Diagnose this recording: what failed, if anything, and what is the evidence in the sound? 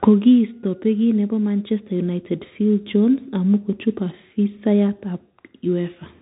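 Codec stage: the speech runs through a Bluetooth CVSD headset codec throughout, with nothing above 3.8 kHz, scratchy s sounds and granular hiss from coarse one-bit delta steps.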